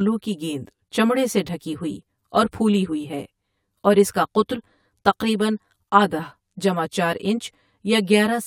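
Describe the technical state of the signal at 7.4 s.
At 7.4 s the speech carries channel delay (comb filtering), present across the whole clip rather than just this moment. One channel lags the other by around 10 ms, and when the two are summed to mono the shared content cancels at regularly spaced frequencies, starting near 50 Hz and repeating roughly every 100 Hz. The result sounds hollow and phasey. A spectrogram shows fixed horizontal dark bands at those notches, and the waveform shows a slightly smeared, doubled envelope.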